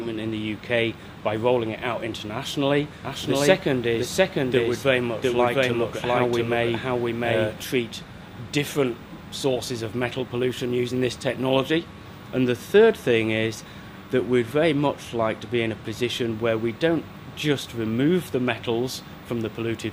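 From 3.05 s to 7.63 s the audio carries a doubled audio track: a second full-band copy trails the original by roughly 0.7 s at about equal level, with no decay or room colour, starting and stopping abruptly. The likely cause is a slower duplicate capture path.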